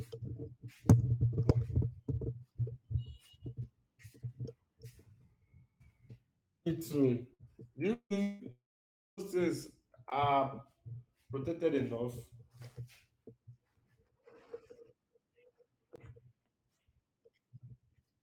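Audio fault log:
7.33–7.42 s, burst of packet loss: A short run of speech packets was lost or arrived too late to play, so the receiver held the last sound and faded it. About 58 ms of stretched, dimming buzz or hiss is heard where 60 ms of real speech should be. The speech then resumes slightly further on, with that stretch gone.
7.93–8.13 s, 8.22–8.43 s, 8.52–9.20 s, long network dropout: Three stretches with no incoming audio, most likely from a stalling network link. In each, the receiver extended the last sound as a fading tone or hiss for about 170 ms, 174 ms and 656 ms. The first gap ends in about 80 ms of silence. The second stays filled to the end. The third falls to roughly 580 ms of silence. About 180 ms, 180 ms and 660 ms of speech are lost.
10.10 s and 15.96–15.98 s, block of digital silence: A block of zeros was played in place of the audio. At 10.10 s this lasts 16 ms. At 15.96 s it lasts about 21 ms, which fits a 1024-sample block at 48 kHz. 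Each cuts to dead silence and back with no fade, and the fault sounds like a short hole.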